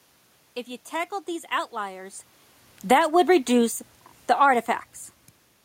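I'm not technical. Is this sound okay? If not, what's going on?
No. Right after "you tackled these outliers", from about 2.75 to 4.57 seconds, the level sinks steadily. This is automatic gain falling: the recording system decided the input was too loud or too noisy and turned its own volume down gradually, so the voice and the room noise behind it fade together. That shared fade is the clue. Separate level shifts near 2 and 5 seconds are just the talker moving relative to the microphone.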